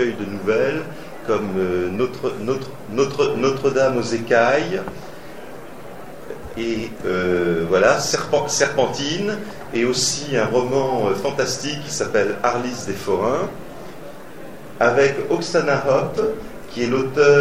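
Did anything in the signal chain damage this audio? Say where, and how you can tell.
Yes: the buffer stage delivered chunks out of order between 6.3 and 6.54 s. One 60 ms chunk arrived three chunks late and played after the audio meant to follow it. Nothing is missing, but that stretch sounds jumbled, with three hard joins.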